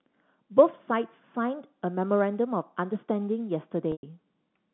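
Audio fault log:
3.92–4.03 s packet loss with pitch repetition: a 110 ms gap is bridged by repeating one pitch period, giving a buzzy hold that fades to silence. On a spectrogram, flat frozen harmonics end in a blank.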